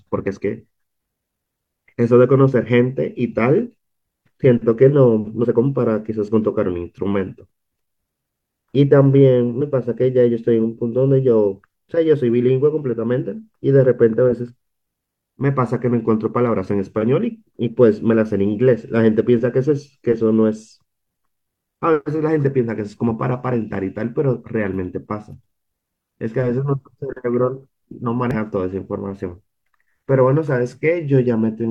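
At 5.40 to 5.45 s, 9.58 to 9.62 s and 28.31 to 28.35 s, the speech breaks into a brief chirp or squawk. This is damaged data in a compressed stream. Corrupt bytes make the decoder misread frames, lose sync and hunt for the next header.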